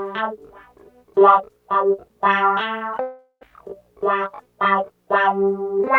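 Long network dropout, 3.01 to 3.43 s: the sound smears into a fading buzz, drops briefly to silence, and resumes with 0.4 s missing, likely because packets stopped arriving.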